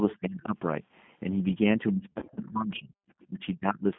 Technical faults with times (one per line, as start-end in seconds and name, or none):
0.00-3.98 G.729 codec
2.13-2.41 VoIP packet loss concealed by the speech codec
3.25-3.85 speech suppressed in double talk